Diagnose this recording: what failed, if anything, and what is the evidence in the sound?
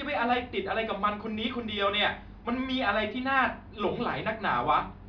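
Nothing failed in this recording, and the sound gives no evidence of any fault.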